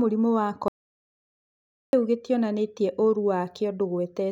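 The speech breaks off right after "mũrimũ wa" at 0.68 s and resumes at "gĩtionanĩtie ũrũ" at 1.93 s, an audio dropout to silence lasting about 1.25 s. The gap is silent with no room tone, which sets it apart from heavy compression, where some background would survive. The input was likely lost, through a disconnection or mute, while recording carried on.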